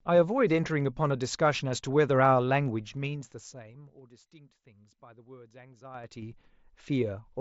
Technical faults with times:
2.79-4.18 zipper noise
5.85-6.32 zipper noise

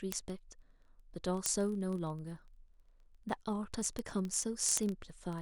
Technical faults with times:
0.12-5.38 word clock ticks

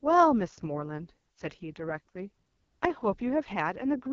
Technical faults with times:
0.00-4.12 AMR wideband (HD Voice) codec

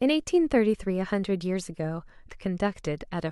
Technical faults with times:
2.28 damaged data in a compressed stream

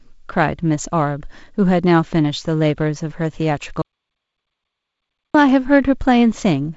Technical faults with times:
3.82-5.34 audio dropout to silence

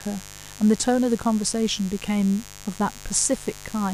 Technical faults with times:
0.00-3.93 mains buzz

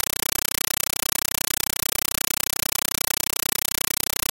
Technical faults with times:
0.00-4.32 compressed stream played as audio

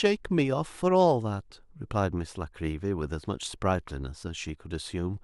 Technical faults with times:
none

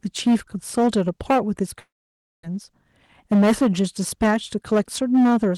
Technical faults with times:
0.00-5.58 hard clipping
1.79-2.45 long network dropout
3.24-5.51 jitter buffer speed-up

